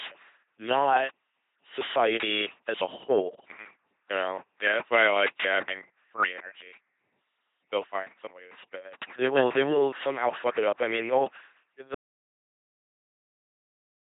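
From the start the speech is a buzzing, mechanical robot voice with nothing above 3.8 kHz, which fits heavy coding through an LPC-10 vocoder at about 2.4 kbit/s. At 11.95 s the sound cuts to complete silence with no room tone through the end, an audio dropout to silence, likely from lost input while recording continued.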